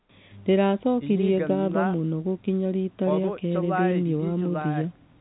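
A speech clip with nothing technically wrong in it, heard through an ordinary telephone-band line whose sound stops just under 4 kHz.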